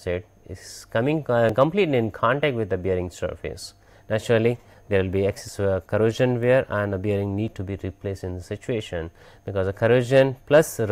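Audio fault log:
1.49 s, 5.49 s, 7.48 s and 9.47 s, overlap between stream segments: each is a brief click or tiny skip where the waveform jumps. The gaps between them are multiples of 2 seconds, which fits the stream's 2-second segments. At each boundary the time stamps of adjacent segments overlap, and the player trims about 12 to 15 ms of sound that was never actually duplicated. The audio on either side no longer joins smoothly, so the jump is heard as a tiny skip.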